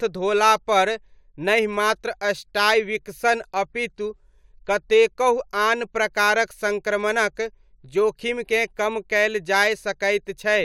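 No dropouts, distortion, noise bursts or timing errors turn up anywhere in the speech.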